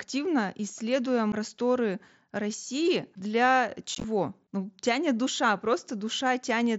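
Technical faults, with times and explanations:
3.95–4.04 s, unconcealed Bluetooth headset packet loss: within about 90 ms, short pieces of sound totalling 45 ms drop out and the gaps are left silent or filled with an idle pattern, with no run longer than 15 ms. That pattern fits several lost headset packets between headset and phone. The wideband mSBC audio on either side stops and restarts with hard edges, giving a brief chopped crackle. Concealed loss would instead smear or repeat sound across each gap.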